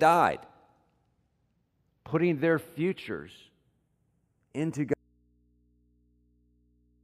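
Throughout this speech recording there is a slow flanging sweep, the sign of channels drifting apart. The left and right channels appear to come from two devices running on separate clocks that disagree by a few tens of parts per million, so the offset between them creeps up to a fraction of a millisecond by the end. When the channels are heard together, the comb-filter notches from that tiny delay glide gradually through the spectrum. At 4.94 s the speech cuts off abruptly, with no fade, and only mains hum remains, about 40 dB below the speech level, until the recording ends. That is an audio dropout to a faint residue. The wanted signal was likely lost upstream while the path after the break stayed live, leaving the open input to pick up hum.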